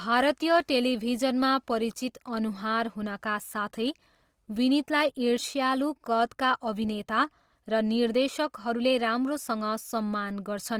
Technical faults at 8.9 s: Opus compression

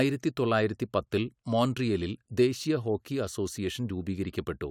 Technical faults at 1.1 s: none

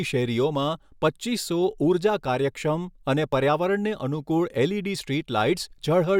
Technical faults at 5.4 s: none

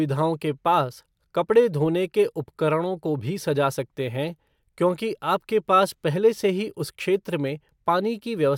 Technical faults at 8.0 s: none

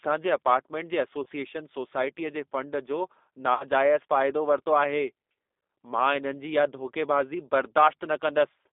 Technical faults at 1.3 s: G.729 codec; VoIP packet loss concealed by the speech codec

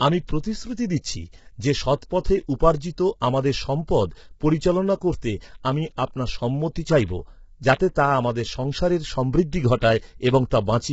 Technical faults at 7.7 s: low-delay AAC compression; pre-echo

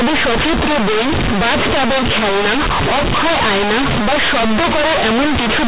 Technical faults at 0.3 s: companded audio read as linear

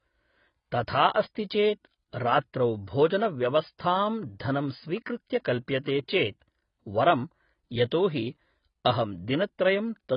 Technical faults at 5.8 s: AAC compression; pre-echo

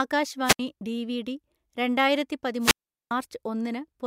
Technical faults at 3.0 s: wireless microphone squelch dropout

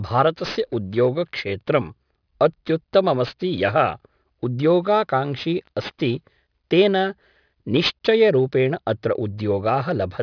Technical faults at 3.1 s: aliasing

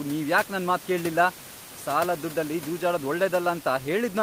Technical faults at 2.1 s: none

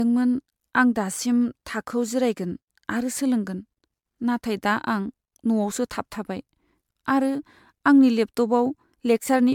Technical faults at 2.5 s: generation loss

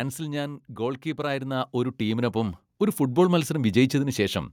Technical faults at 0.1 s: automatic gain falling

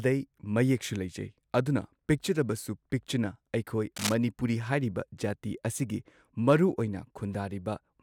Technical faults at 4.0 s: cable scratch noise

